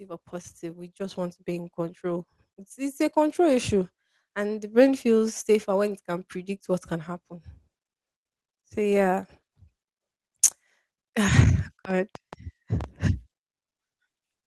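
From 0.05 s to 6.37 s the level climbs steadily as automatic gain rising takes hold: the gain control judges the input too quiet and keeps lifting it, by about 10 dB in all, so speech and room noise swell together until it settles just before "what can happen". On a waveform the envelope widens like a slow ramp, and a spectrogram shows every band, including the noise floor between phrases, brightening uniformly over those six seconds.

Between 11.85 s and 12.85 s a train of clicks sits on top of the speech: about seven sharp, similar ticks at roughly 5 per second but unevenly spaced, peaking at around the speech's own level and audible in gaps as well. The likely cause is interference from nearby equipment or a faulty connection or power supply injecting pulses. A waveform shows thin vertical spikes, and a spectrogram shows narrow full-band vertical lines at irregular intervals across that second.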